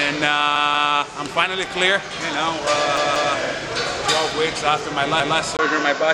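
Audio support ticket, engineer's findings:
Repeated buffer at 0.56–0.93 s, 2.97–3.34 s and 5.20–5.39 s. Same 186 ms segment replays with a hard join at each repeat: twice at the first two events, once at the third. Stutter fits an 8192-sample playback buffer underrunning. No audio appears dropped.

From 5.57 s to the end, the sound dulls with nothing above 7.6 kHz. A 20 ms gap precedes it, and a faint new noise floor sits about 50 dB below the signal, with no obvious level change. Likely an input switched to a poorer device mid-recording.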